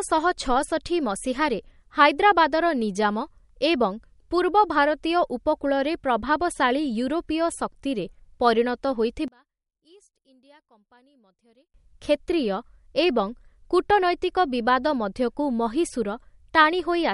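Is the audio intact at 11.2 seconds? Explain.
No. From 9.28 to 11.74 s, just after "ଶକ୍ତିରେ ପରିଣତ", the speech drops by about 34 dB and turns faint. The likely cause is one channel inverted: with one side's polarity reversed, the centred speech cancels when summed to mono, leaving only the small channel differences.

Running through this moment and the whole clip, the sound is watery and swirly, with smeared consonant attacks and nothing above 11.2 kHz. This points to MP3 compression at a low bitrate, around 48 kbps, where the encoder cuts the treble and drops weak spectral detail frame by frame.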